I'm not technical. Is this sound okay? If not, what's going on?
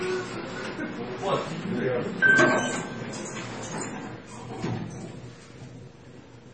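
No. MP3 compression throughout, likely squeezed too hard: everything above 8.4 kHz is gone and faint detail flickers, so the sound turns dull and watery.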